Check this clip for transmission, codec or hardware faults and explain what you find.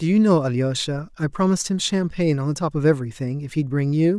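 No faults can be heard in this speech clip. There is therefore no event to time, trace to a cause or describe.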